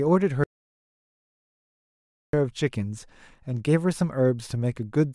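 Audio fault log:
0.44–2.33 s, audio dropout to silence: the speech cuts off abruptly and returns mid-flow after about 1.9 s of silence. Unlike a noise gate or fade, no room tone survives, which points to a likely lost input while recording continued.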